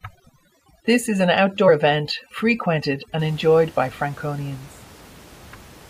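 From the start to about 3.19 s, just before "enjoyed by", there's overdone noise removal. The suppressor was set too hard, clamping bands near its noise estimate, so the room noise, about 25 dB under the speech, drops and breaks up into twinkly specks.

At about 1.67 s there's a compressed frames skipped moment: a short stretch, roughly 70 ms and about three frames' worth, never gets played, which fits a 23.2 ms codec frame. The audio simply jumps ahead past the gap.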